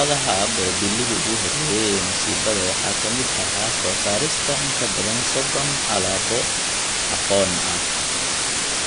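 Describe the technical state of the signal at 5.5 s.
At 5.5 s, as throughout the clip, low bit depth with dither is present: a constant, even hiss about 5 dB louder than the speech, consistent with dithered rounding to about 3 bits. The speech also has plainly audible ringing, washy damage with nothing above 10.1 kHz, likely from WMA compression at around 32 kbps zeroing weak spectral lines.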